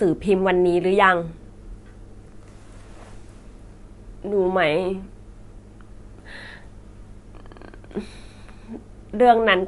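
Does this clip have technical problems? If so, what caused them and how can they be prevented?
Yes. MP3 compression runs throughout the speech, and it is plainly audible: nothing reaches above 11.3 kHz, and the s sounds have a watery, swirling quality. The likely cause is an encoder starved of bits, which fits a rate around 48 kbps. It cuts the treble at a fixed point and drops weak frequency lines that flicker on and off between frames. To prevent it, encode at a higher bitrate or keep a lossless copy.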